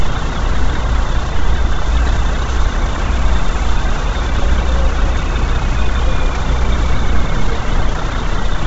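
An everyday sound recording with heavy codec damage from start to finish. Nothing remains above 7.8 kHz. The upper band sounds grainy and breathy, with noise filling in for lost detail. This is likely Bluetooth LC3 compression, consistent with 10 ms frames at around 16 kbps.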